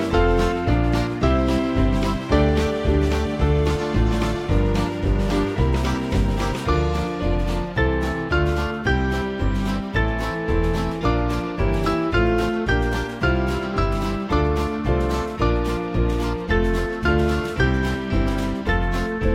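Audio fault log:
Nothing to log here: the audio runs along without a single glitch or hiccup worth noting.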